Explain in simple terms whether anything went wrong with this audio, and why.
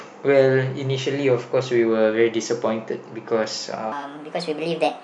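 Something went wrong near the end. From 3.92 s to the end at 5.03 s, there is a section at the wrong speed. It plays 1.34 times too fast, so the speech sounds hurried and roughly five semitones higher. The likely cause is playback set to the wrong clock.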